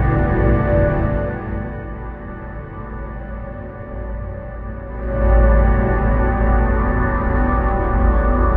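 An everyday sound recording with zipper noise. From 0.87 to 1.92 s the level drops by roughly 15 dB, and from 4.86 to 5.32 s it rises by roughly 15 dB. Both moves come in tiny unsmoothed steps, around a hundred per second. Each step clicks, so a fine zipping rides on the sound.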